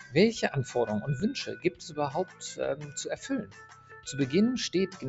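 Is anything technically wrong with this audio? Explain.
Yes. A noise suppressor applied to music or sounds is left on throughout: held and steady parts keep dipping and recovering by around 10 dB, so the audio pumps and thins. A processor tuned for speech treats sustained tones, ambience and tails as noise and pulls them down.

Sound cut by the noise suppressor is clearest at 1.57–1.98 s (about 10 dB down), 2.26–2.42 s (about 11 dB), 2.82–2.97 s (about 8 dB) and 3.45–4.07 s (about 10 dB). In each span, sustained or decaying material sinks or has its tail clipped, while sharper onsets pass through.

Small forward jumps in the sound occur at 1.20 s and 3.92 s, each skipping a few milliseconds with no gap of silence. This is likely a dropped buffer (overrun), where samples were overwritten before being read and the two sides were spliced together. The call microphone processing's high-pass filter, which removes the lowest bass, is working normally.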